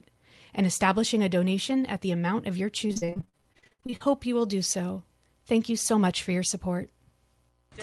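From 2.87 to 4.07 s, repeated packet loss hits the stream. Gaps up to 60 ms arrive one after another, and concealment stretches the previous sound across nearly half that span, so the audio turns choppy and robotic, with fragments missing.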